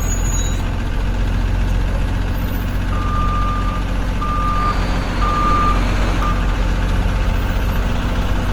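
Throughout, the sound is rough and grainy, with tones breaking up into fizzy noise rather than the swirling, watery gaps of MP3. That likely points to Opus compression in its music mode at a low rate, near 24 kbps, with bandwidth still reaching about 20.2 kHz.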